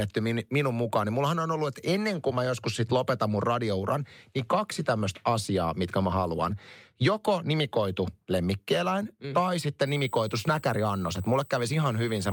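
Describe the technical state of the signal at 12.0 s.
At 12.0 s the speech carries USB whine. It begins at 9.86 s, right after "lemmikkieläin mm tai sitten", and lasts to the end of the clip. The USB bus draws current in 125 microsecond microframes. That pulsing leaks into the audio through the power or ground. The result is a steady, high-pitched whine with a fundamental at 8 kHz. The strongest component is its harmonic at 16 kHz. It sits roughly 25 dB below the signal.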